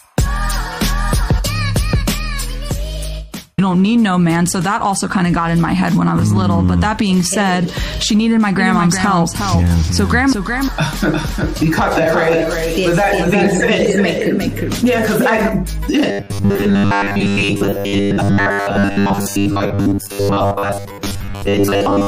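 From 8.59 to 15.49 s, a flat, abrupt echo trails the sound by roughly 0.4 s at about 5 dB down. This doubled audio track is likely a second capture path mixed in late. From 16.11 to 22.07 s, the sound becomes a rigid metallic buzz at 100 Hz. This robotic sound is likely from repeated short buffers, which fits a 10 ms buffer replaying in place of most of the real audio.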